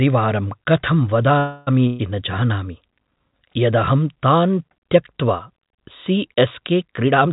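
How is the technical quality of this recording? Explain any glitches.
The recording has three glitches over a narrowband call path, with nothing above 4 kHz, which fits G.711 mu-law at 64 kbps.

From 1.38 to 1.69 s there is a call audio freeze. The last sound is stretched into a fading buzz or hiss for about 0.29 s, likely because delayed packets drained the jitter buffer. A spectrogram shows flat, smeared bands, and nothing is lost.

From 1.87 to 2.01 s a burst of packet loss hits. The receiver fills it with a decaying held sound, then resumes about 0.12 s further on, leaving a tapering waveform envelope and an abrupt restart.

From 7.03 s to the end a jitter buffer speed-up plays the audio at about 135% speed with unchanged pitch. Roughly a tenth of a second of pitch periods is cut, so the sound seems hurried and the waveform is compressed in time.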